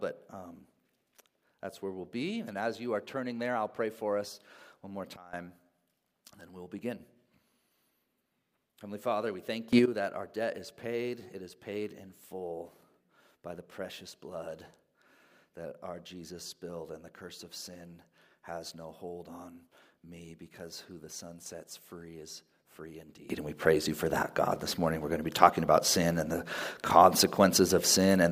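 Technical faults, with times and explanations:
5.16–5.33 s, 9.73–9.86 s and 23.30 s to the end: sudden gain jump. The digital gain was likely changed with no ramp, so sound and background noise step together, down about 17 dB, then up about 15 dB, then up about 17 dB.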